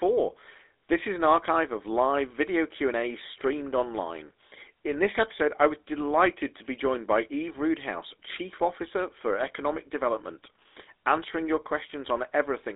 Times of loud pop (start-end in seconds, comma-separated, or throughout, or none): none